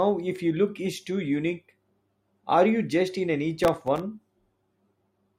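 A speech clip with processor overload crackle from 3.64 to 4.00 s: missed buffers, apparently very short, replay old audio, drawing vertical broadband streaks and hard-edged waveform steps.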